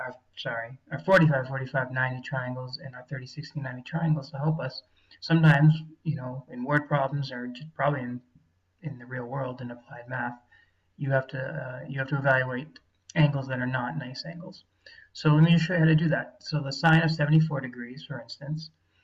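No technical faults can be heard anywhere in the audio.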